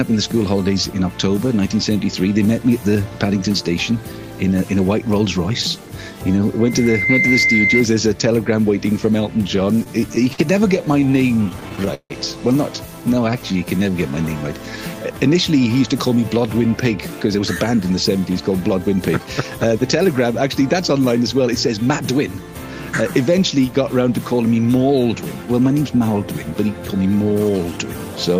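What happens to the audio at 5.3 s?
Nothing goes wrong at 5.3 s; the audio runs on intact through that moment, with no dropout, click or distortion.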